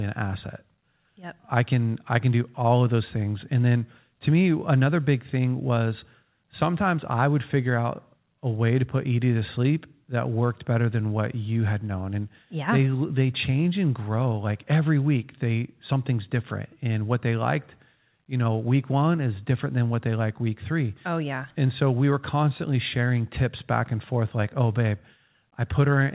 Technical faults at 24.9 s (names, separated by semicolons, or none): none